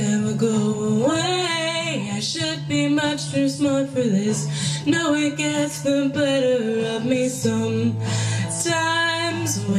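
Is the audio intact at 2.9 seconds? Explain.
Yes, the audio is intact at 2.9 seconds, with nothing audible there to indicate a fault.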